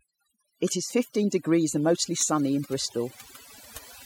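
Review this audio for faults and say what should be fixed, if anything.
Overdone noise removal runs through the whole clip. The noise reduction was set far too aggressively. Any frequency band close to the estimated noise floor gets pulled down hard or cut entirely. Quiet parts of the speech fall under that line and vanish with the noise. The background between phrases drops away, breaking up into twinkling, chirpy specks. To prevent it, apply gentler reduction and check it by ear against the untreated recording.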